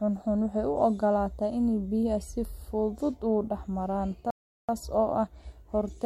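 At 4.30 s, after "fudud u dhex maraan", the speech cuts to silence for 0.38 s, resuming at 4.69 s with "oo ka"; a playback stall, likely the player starved of data.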